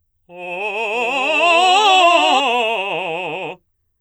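From 0.94 to 2.40 s the music carries a doubled audio track: a second, somewhat quieter full-band copy trails the original by about 0.7 s, likely captured again through a slower path. It switches on and off abruptly, and a spectrogram shows every onset repeated as a clean, undecayed shadow.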